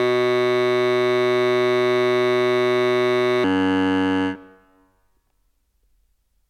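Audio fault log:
3.44–6.49 s: section at the wrong speed. From 3.44 s to the end, the music runs at 0.762 times its proper speed, so tempo slows and pitch drops about five semitones together, abruptly. This is likely from playback or editing against the wrong clock rate.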